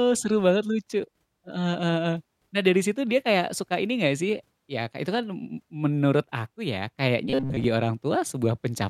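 Robotic sound from repeated short buffers hits this speech at 7.30–7.64 s, after "m menurut aku ya": a rigid 134 Hz buzz over most of that stretch, likely from a replayed 7.5 ms buffer.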